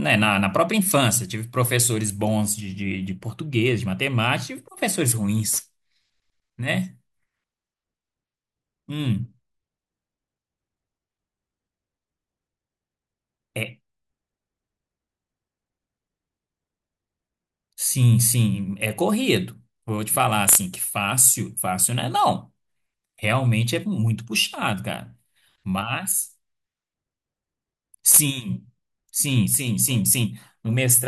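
De-emphasis applied wrongly from 2.61 to 5.05 s: a treble cut meant for pre-emphasised speech rolls off highs, about 8 dB down at 10 kHz, sounding dull and muffled.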